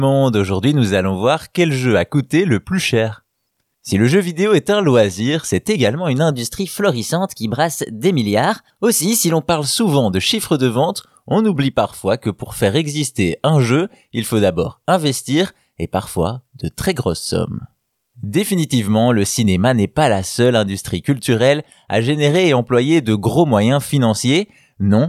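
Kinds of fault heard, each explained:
Wrong sample rate: 6.31 to 9.49 s, after "loisir c'est également une", speech plays about 1.09 times fast and 1.5 semitones high, fitting 44.1 kHz audio played at 48 kHz.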